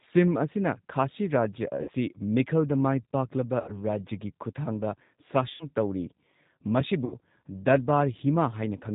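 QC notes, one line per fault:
Throughout: G.729 codec. The speech is rebuilt from a vocal tract filter, a pitch predictor and a few pulses per frame, so it sounds rough and slightly synthetic. Nothing above 4 kHz passes. The damage is plainly audible and fits an 8 kbit/s G.729A stream.
1.82–1.90 s, 3.60–3.81 s, 5.54–5.66 s, 7.05–7.14 s: VoIP packet loss concealed by the speech codec. At each point the decoder stretches its last pitch and filter into a fading buzzy tone or coloured noise. The gaps sound like 60 ms, 80 ms, 60 ms and 60 ms, which fits three or four lost packets each. The speech stays weak briefly after each one.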